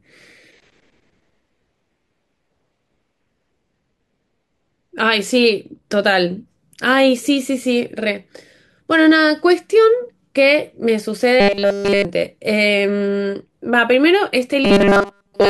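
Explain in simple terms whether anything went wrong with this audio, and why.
Twice the speech turns into a stiff, metallic buzz: from 11.40 to 12.05 s, and again from 14.65 s to the very end at 15.50 s. It still roughly follows the speech but sounds mechanical, humming at a fixed 200 Hz. This is robotic sound from repeated short buffers. New audio likely arrived too slowly, so the playback kept looping its last 5 ms snippet in place of the missing sound, throughout the first stretch and for most of the second.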